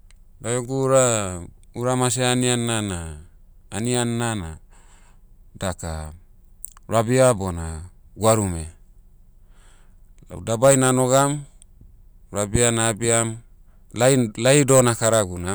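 Hard clipping at 10.64–11.23 s and 14.02–15.21 s: speech overdrives a stage by about 7 dB, then about 9 dB, flattening peaks into harsh, crackling fuzz.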